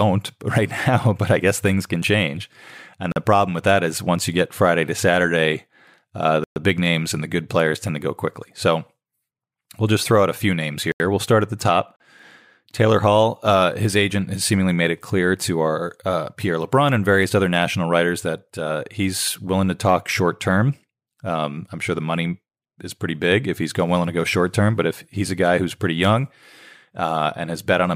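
Speech interrupted by four blocks of digital silence: 3.12–3.16 s before "the problem with that", 6.44–6.56 s before "big names and the", 10.92–11.00 s after "out a few names", and 11.96–12.00 s. Each is a hard-edged flat line on the waveform and a blank vertical gap on a spectrogram, most likely from an output buffer not filled in time.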